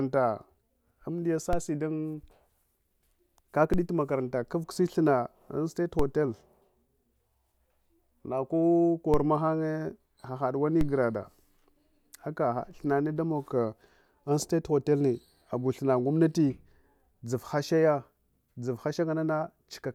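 DC steps occur at 1.53, 3.74, 5.99 (just after "an state"), 9.14 and 10.81 s. Each time, the waveform's zero line jumps by about -18 dBFS and drains away through a 5 Hz high-pass, producing a low thump beneath unchanged speech.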